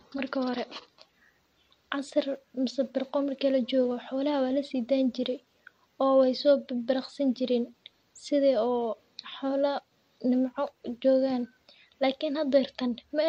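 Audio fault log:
No fault is logged for this speech clip.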